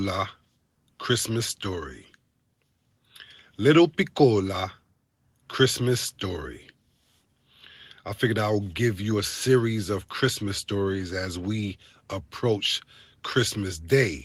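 No technical faults can be heard in this speech clip.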